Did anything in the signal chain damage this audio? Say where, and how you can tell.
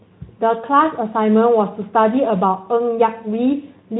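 No, nothing along the signal chain has harmed this speech recording, so there's no damaged stage to point to.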